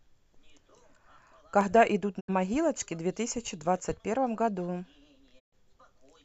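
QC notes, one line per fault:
1.61 s and 3.75 s, dropped samples: each a single sharp click; likely a fraction of a millisecond missing, so the waveform jumps abruptly to a later value.
2.19 to 2.30 s, digital broadcast dropout: sound fades out over 20 ms into a 72 ms silence, the receiver muting on bad frames, consistent with three lost frames.
5.38 to 5.54 s, digital broadcast dropout: a longer 120 ms hole after a 20 ms fade, pointing to about five failed frames muted before reception resumed.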